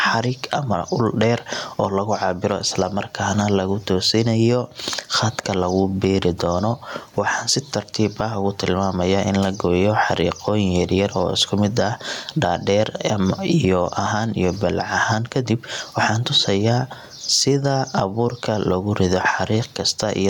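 Gain pumping runs through the whole speech recording, from start to finish. The gain swings by around 10 dB each time the talker speaks loudly, so the level breathes with every loud sound and the dynamics feel squashed. The likely cause is microphone gain set far too high, with a fast limiter or compressor clamping down on each peak. The room noise sits about 41 dB below the speech.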